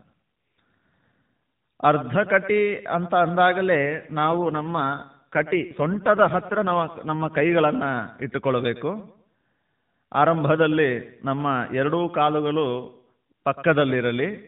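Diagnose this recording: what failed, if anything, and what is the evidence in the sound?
AMR rate drop in the codec, 3.82 to 7.52 s: the speech turns buzzier and more synthetic with no gap, fitting a 12.2 to 5.9 kbps drop to make room for error protection.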